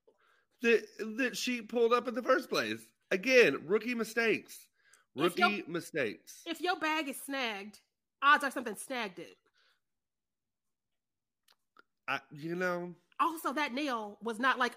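Nothing in the speech stood out as a technical problem on listening.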